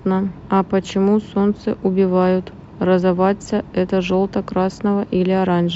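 A speech recording with a run of faint, evenly spaced ticks from about 0.2 s to 5.64 s, roughly one every third of a second and around twenty in all. These are clock slip clicks, likely caused by two devices running on unsynchronised clocks that differ by something like 70 parts per million. Each time that drift adds up to a full sample, a single sample is dropped or repeated, leaving a tiny discontinuity in the waveform.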